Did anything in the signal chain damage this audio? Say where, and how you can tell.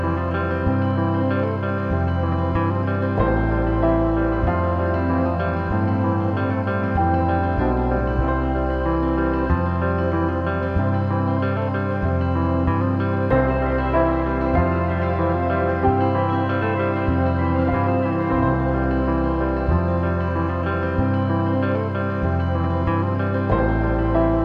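No signal-chain damage detected.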